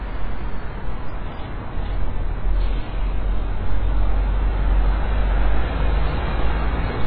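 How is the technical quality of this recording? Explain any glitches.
Technical quality is poor, with heavy compression damage throughout. Nothing is present above 5 kHz, and the remaining band sounds dull and smeared, with a warbling, fizzy texture on sustained sound. This is likely AAC compression at a very low bitrate, consistent with roughly 12 kbps, where the encoder drops the top band and coarsely quantises what remains.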